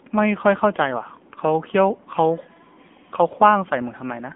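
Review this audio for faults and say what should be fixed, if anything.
The whole clip carries AMR narrowband mobile codec damage. Nothing reaches above 3.5 kHz, and the lows thin out below about 200 Hz, giving the narrow phone-line band. The damage is plainly audible: the speech has a buzzy, synthetic edge, consistent with a low AMR-NB mode around 8 kbps, where a vocal-tract model driven by sparse pulses stands in for the real waveform. A simple band-limiting filter would sound muffled but natural; this codec adds that artificial, buzzing texture. To prevent it, record or route the call over a wideband path instead of the narrowband mobile codec.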